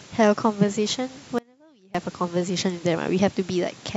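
Audio dropout to a faint residue from 1.39 to 1.95 s in this speech clip: the signal cuts out abruptly for about 0.56 s, leaving only a faint leak roughly 30 dB down, most likely a momentary loss of the feed while the downstream path stayed live.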